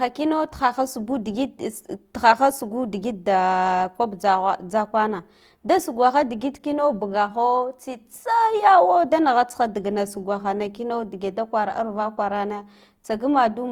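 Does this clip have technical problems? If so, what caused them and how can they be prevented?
Yes. Opus compression affects the speech for the whole clip, with a grainy, rough texture and a noisy sheen that is plainly audible. The likely cause is the Opus music (CELT) mode at a low rate, which fits about 24 kbps: each band's energy is kept but filled with folded or noise content. On a spectrogram, content reaches about 20.2 kHz, with speckled, smeared harmonics. Encoding at a higher bitrate would prevent it.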